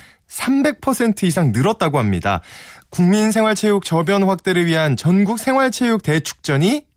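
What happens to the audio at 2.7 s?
Nothing goes wrong at 2.7 s: the speech there comes through intact, with only the light, ordinary character of the Opus voice compression it passes through.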